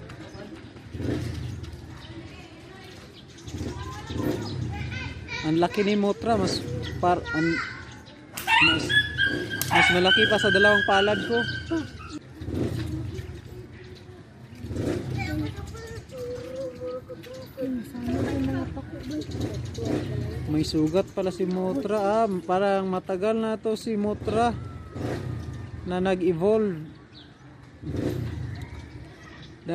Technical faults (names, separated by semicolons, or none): damaged data in a compressed stream